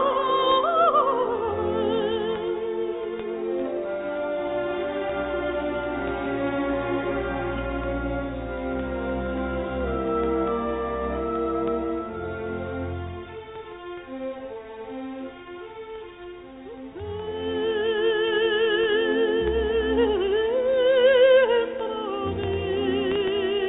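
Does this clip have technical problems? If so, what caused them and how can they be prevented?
No, nothing here counts as a technical problem; the sound simply carries the narrow, telephone-like character of a call path coded as G.711 mu-law, which leaves nothing above 4 kHz, and that's normal for this kind of link.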